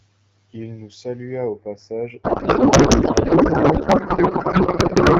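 From 2.23 s to the end, a codec payload misread replaces the speech with garbled noise and warble that barely tracks it. The AMR frames were packed octet-aligned but decoded as bandwidth-efficient, putting every field in the wrong place. Unlike packet loss, it never recovers or leaves gaps. Before that, the AMR wideband coding sounds clean, fitting a rate around 12.65 kbit/s.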